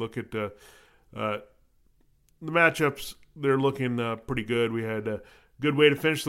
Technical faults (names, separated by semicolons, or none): none